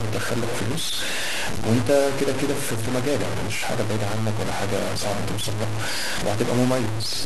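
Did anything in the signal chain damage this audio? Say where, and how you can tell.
Yes. The speech is degraded by low bit depth without dither from start to finish. Every syllable carries a coarse, grainy distortion that tracks the level and shape of the signal rather than sitting underneath it as steady hiss. The error is nearly as loud as the speech itself, and quiet tails break up into sputter or drop out entirely. This points to a sample-format conversion stage that likely truncated the audio to about 4 bits without adding dither.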